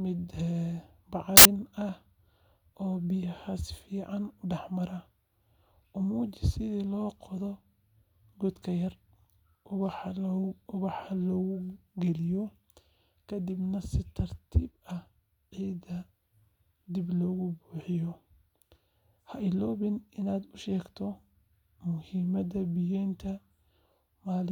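At 1.37 s the speech breaks into a burst of loud, harsh broadband noise that lasts until 1.45 s, about 80 ms. This is a case of samples built from the wrong bytes. For that short stretch, each sample was assembled with its bytes misplaced, shifted or swapped. The rapidly changing low-order bits ended up as the large part of every value. The result is a harsh hiss.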